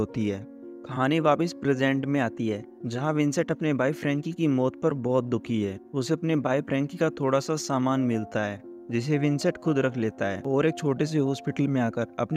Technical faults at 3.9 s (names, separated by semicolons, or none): none